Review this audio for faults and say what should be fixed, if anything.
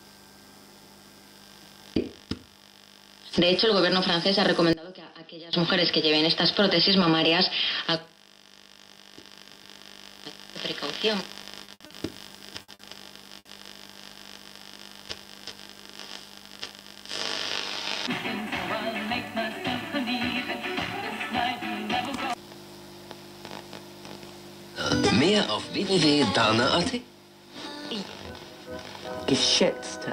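From 4.73 to 5.53 s the level falls by about 22 dB and the centre of the image nearly disappears, leaving a faint residue. That is the mono-sum cancellation pattern of one channel inverted, so one stereo channel's polarity has likely been flipped. Prevention: check polarity on each channel and confirm mono compatibility before mixing down.

Short stalls from a late packet occur at 11.65, 11.86 and 12.74 s. Each time the jitter buffer ran dry and the last sound was stretched, for 30, 40 and 50 ms respectively, and then playback resumed with nothing lost but with a slight buzz or dip. Prevention: use a deeper or adaptive jitter buffer that absorbs delay swings of around 50 ms.

A burst of packet loss occurs at 11.74, 12.62 and 13.39 s. At each point about 60 ms of audio is missing. The receiver filled each gap by continuing and fading the last sound, so there is an audible held buzz or hiss, and the audio then picks up further on. 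Prevention: add forward error correction or redundancy and fix the network path that causes these clustered losses.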